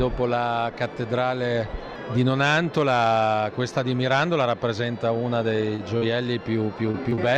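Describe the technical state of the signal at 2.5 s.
Nothing goes wrong at 2.5 s; the audio is intact at that point, with no dropout, distortion or other technical fault.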